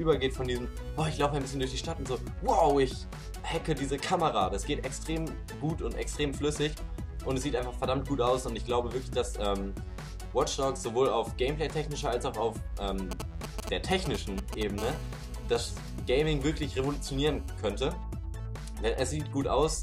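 From 13.11 to 14.63 s, GSM signalling bursts break in: a nearby 2G phone's short groups of radio bursts are rectified by the audio circuit, giving a galloping dit-dit-dit of 217 Hz buzzes at roughly 5 dB below the signal. A spectrogram shows clustered vertical stripes with harmonic ladders.

From 14.78 to 17.58 s, GSM phone buzz follows as the phone enters a call, sending bursts 217 times a second. The result is a hard, raspy 217 Hz buzz, about 19 dB below the signal, seen as evenly spaced harmonic lines and a regular pulse train in the waveform.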